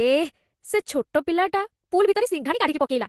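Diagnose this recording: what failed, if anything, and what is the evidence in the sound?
From 1.83 s to the end, the speech suddenly runs about 1.9 times faster while its pitch stays put. It sounds rushed. This is a time-stretched section, likely from software fitting the audio to a length by dropping short pieces.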